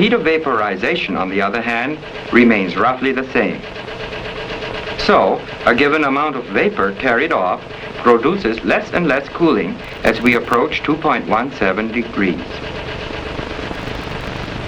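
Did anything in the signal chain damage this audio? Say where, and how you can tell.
Yes: processor overload crackle at 9.85–10.54 s and 13.74–14.46 s, a driver or buffer fault. Each burst is gritty tearing made of a few dozen tiny silent gaps with hard edges. The processor missed deadline after deadline on buffers of a millisecond or two.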